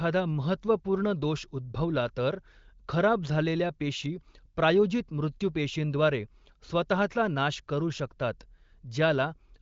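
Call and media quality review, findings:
No faults found: the speech carries the wideband-core-plus-noise-fill character of an AMR-WB HD Voice path with content up to about 7.6 kHz and at most faint coding texture, which fits one of its higher bitrates.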